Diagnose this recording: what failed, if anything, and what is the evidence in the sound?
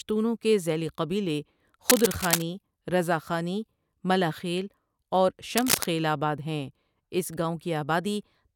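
Two bursts of cable scratch noise ride over the speech, from 1.89 to 2.42 s just after "کے زیلی قبیلے", and from 5.57 to 5.85 s just after "ملا خیل اور". Each is a dense, irregular crackle and rustle roughly as loud as the speech itself. The stage is the analogue wiring: the likely cause is a worn cable, connector or control being moved, so its contact resistance jumps erratically and injects ragged noise into the signal.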